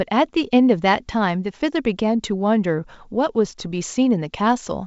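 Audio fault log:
No fault to log for this speech clip.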